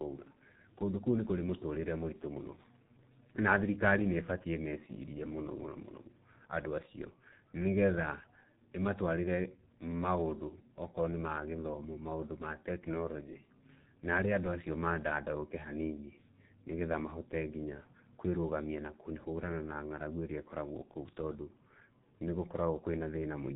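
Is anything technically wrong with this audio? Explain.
Yes. G.723.1 codec damage runs throughout the speech, and it is heavy. This early telephony coder works in 30 ms frames at about 6.3 kbit/s, discards everything above 4 kHz and updates its voice model slowly, so the voice comes out muffled and hoarse, with smeared consonants.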